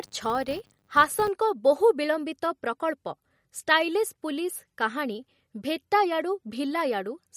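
From 0.00 to 1.30 s the speech carries a steady buzz at 100 Hz whose loudness rises and falls with the speech level. This is a filter restarted on every block. The filter discards its memory at each block boundary and begins again from silence, so every block opens with a small transient. At a 100 Hz repetition rate those ticks merge into a buzz that appears only when signal is present.

Across the whole clip the sound has a watery, swirling quality. Sibilants chirp metallically and consonant onsets are smeared. This is likely MP3 compression at a low rate, which fits a bitrate around 48 kbps. With too few bits, the encoder cuts the treble at a fixed frequency and drops weak spectral lines, which switch on and off from frame to frame and produce the swirl.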